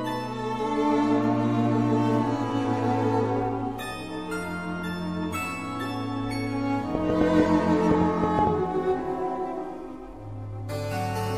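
From about 6.95 s to 8.48 s there's a train of clicks: roughly ten sharp pops, averaging a bit over five per second but spaced unevenly, so it ticks along with a stumbling rhythm rather than a steady beat. Each click looks much the same and jumps out well above the sound, something like 20 dB hotter, and they'd cut through pauses too. That's likely interference from nearby gear or a faulty connection or power supply.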